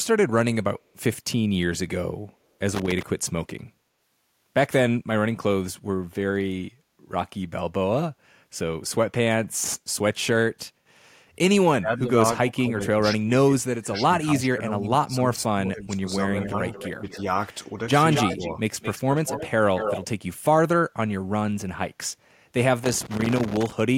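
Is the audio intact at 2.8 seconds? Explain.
No. Loose connector crackle runs from 2.75 to 3.03 s. A worn contact rapidly makes and breaks, chopping the speech into an irregular scratchy burst. The waveform shows ragged dropouts and sharp spikes, and the spectrogram shows scattered broadband vertical streaks.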